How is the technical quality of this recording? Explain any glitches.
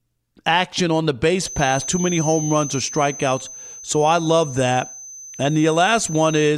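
The recording has one clear technical problem: a feedback whistle runs through most of the speech. From 1.32 s to the end of the clip, a thin, steady tone at about 6.2 kHz sits behind the voice, roughly 15 dB below it, swelling and fading slowly in level. The likely cause is a loudspeaker feeding back into the microphone with the loop gain held just at the edge of instability, so that a single high frequency sustains itself without growing into a full howl.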